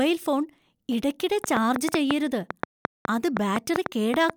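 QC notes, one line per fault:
1.44–4.31 s, train of clicks: around fifteen sharp, similar ticks, about 5.25 per second at an uneven pace, popping well above the speech, likely from interference or a faulty connection.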